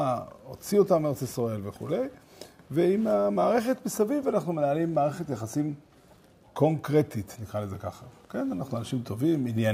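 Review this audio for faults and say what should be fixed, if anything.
A short burst of burbling breaks over the sound from 9.41 to 9.51 s, near the end. This is DAB burbling. Bit errors slipped past error correction and corrupted MP2 sub-band samples, putting short blips of noise in single bands over what fits about four frames. A stronger signal, a better antenna or a higher error-protection level would prevent it.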